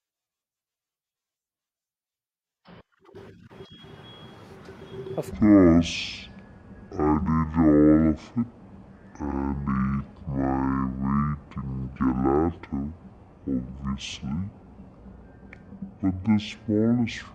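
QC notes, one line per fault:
5.31–17.34 s, section at the wrong speed: from just before "and piazzas are where" to the end, speech plays at 0.5x, roughly ten semitones lower and dragging, likely from a clock mismatch. The spectrogram shows harmonics and formants squeezed downward, and the waveform shows syllables stretched to double length.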